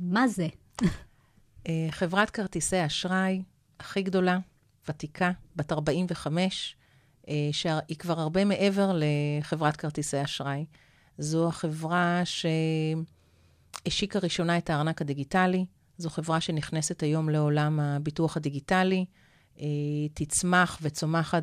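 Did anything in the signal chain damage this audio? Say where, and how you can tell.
No, nothing in the chain audibly damaged this speech recording at any stage.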